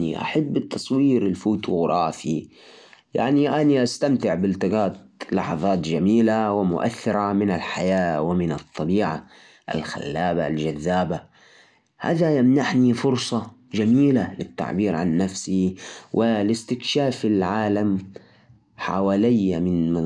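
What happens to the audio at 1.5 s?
Nothing goes wrong at 1.5 s; the speech plays through that moment intact, with no dropout, click, distortion or other fault.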